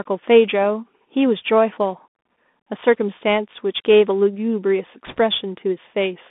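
A speech clip carried throughout by the Bluetooth CVSD headset codec, with plainly audible damage. The sound is confined to roughly 200 Hz to 3.6 kHz, which fits a 64 kbps CVSD link. Each sample is coded as a single up-or-down step whose size adapts, so loud high-frequency sounds outrun the step, giving a scratchy edge to sibilants and a fine granular hiss beneath the speech. On a spectrogram, energy stops abruptly at the 3.6 kHz ceiling and thins below 200 Hz, with a speckled noise floor filling the band. From 5.07 to 5.18 s there are bit errors on a Bluetooth voice link, at a rate of a couple of percent. Because every CVSD bit carries the same small weight and the decoder recovers from errors quickly, this comes out as a brief rushing crackle rather than loud clicks. The waveform shows a short stretch of dense, jagged noise over the speech, and the spectrogram shows a broadband smear across the band for about a tenth of a second.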